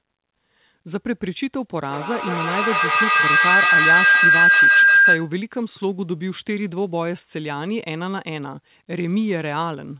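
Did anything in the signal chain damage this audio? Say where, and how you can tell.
Yes. From 1.86 s to 5.37 s a feedback howl swells over the speech, a ringing tone near 1.5 kHz whose repeats come roughly every 150 ms and which peaks about 10 dB above the talker, inside the band the call codec passes below 4 kHz. The stage is acoustic, in the call itself: two devices in one room formed a microphone-to-loudspeaker loop whose gain exceeded unity, so each 150 ms trip reinforced that frequency until the loop was broken.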